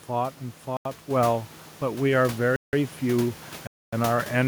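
Speech, with three abrupt drops into complete digital silence. Each starts and ends with no fade: a short hole from 0.77 to 0.85 s (85 ms), a longer one from 2.56 to 2.73 s (171 ms), and the longest from 3.67 to 3.93 s (256 ms). Even the background room noise, sitting about 18 dB under the speech, vanishes during each gap. These are blocks of digital silence, most likely where the program failed to fill its output buffer in time and zeros went out instead. The lengths step in exact multiples of the first, which fits buffers of 4096 samples at 48 kHz, with one, two and three buffers missed. At 1.11 s the speech and the room noise together jump up by about 4 dB in a single step and stay there. That is the microphone volume stepped up: the call software judged the input too quiet and raised the device gain at once, so everything the microphone picks up gets louder together.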